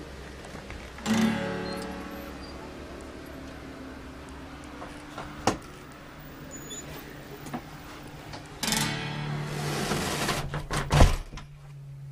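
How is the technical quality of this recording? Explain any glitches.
Two brief glitches mar the recording, both from damaged data in a compressed stream, at 4.46 s and 11.71 s. Corrupted bytes made the decoder misread frames and hunt for the next header, producing a short chirp, squawk, click or hole.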